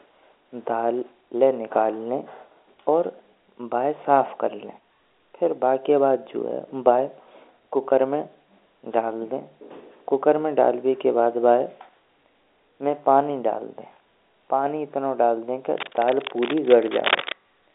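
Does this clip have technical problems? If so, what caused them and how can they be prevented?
Yes. At 13.94 to 13.96 s there is a brief packet loss with pitch repetition. The receiver bridged the gap by repeating the last pitch period of the speech, so the sound holds on one slightly buzzy pitch for a moment before normal audio resumes. The roughly 20 ms gap fits the loss of a single packet of that length, short enough that the repetition covers it without fading to silence. Prevention: carry the call over a network path with prioritised voice traffic and an adequately sized jitter buffer, or add forward error correction, so packets arrive intact.

From 15.78 to 17.34 s, cable scratch noise sits over the audio as dense, uneven scratching and rustling. It is strong, only a few dB below the speech, and lasts about one and a half seconds. This is most likely a worn cable, connector or control being moved, with its contact resistance fluctuating rapidly and injecting noise bursts into the signal. 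Prevention: replace or clean the suspect cable and connectors and secure them so they are not disturbed during recording.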